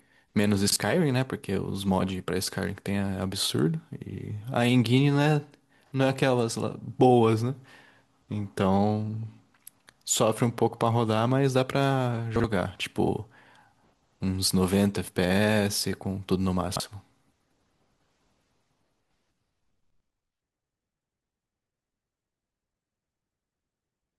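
Speech, with chunks out of order at three points. At 0.68 to 0.76 s and again at 12.36 to 12.44 s, one 40 ms chunk plays after the chunk that should follow it. At 16.64 to 16.8 s, a chunk arrives three chunks late. Nothing is missing. The sound is simply shuffled. Each swap leaves hard joins, heard as a brief jumbled stutter.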